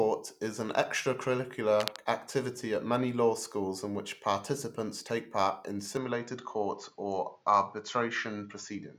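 At 1.80 s a burst of cable scratch noise cuts across the speech for about 0.18 s, ending near 1.98 s. It is a dense, irregular rustle sitting only a few decibels below the speech, loud enough to compete with it briefly. The likely cause is a worn lead, plug or control being disturbed, so that its contact resistance jumps around rapidly and injects ragged noise into the signal path.

From 5.97 s to the end, the sound narrows abruptly. Nothing above 7.2 kHz survives, so the speech loses its air and takes on a duller, more boxed-in quality. There is no gap at the changeover and no obvious jump in level. A new noise floor appears, roughly 40 dB below the speech. This points to an input switched to a poorer device, likely a different microphone or a headset's call-mode path with a restricted bandwidth.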